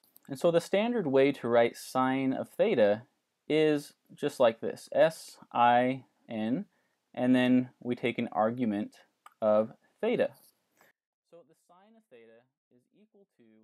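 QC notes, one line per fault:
10.91 to 13.63 s, one channel inverted: the audio collapses for the rest of the clip, background included, leaving only a residue about 32 dB down. The likely cause is reversed polarity on one stereo channel, so the shared content cancels in the mono sum.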